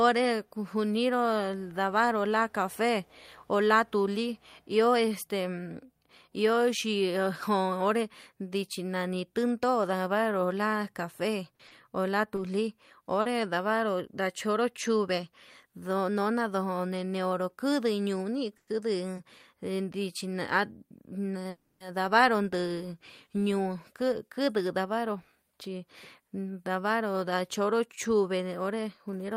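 Speech, with a handful of network-delivery problems. Short concealed packet loss shows up at 11.55 s and 11.67 s, right before "o la", and again at 13.21 s: each time about 40 ms never arrived and got patched over, so you hear a quick smear or wobble. There are two short stalls from a late packet, at 12.35 s and 19.15 s, where the last sound gets stretched about 20 ms while waiting, so it hangs a touch too long with nothing actually lost. Then come two call audio freezes. At 18.57 s there's a 100 ms hold that trails into about 30 ms of silence, and at 21.49 s there's a longer 310 ms hold. Both are likely packets held up in transit draining the jitter buffer, which puts a gap into the audio rather than dropping anything. Finally, a jitter buffer speed-up runs from 24.29 s to 24.78 s, just after "nduu ñuu". The receiver trims roughly 50 ms to catch up, so that stretch plays at about 108% speed with the pitch unchanged and sounds a bit rushed.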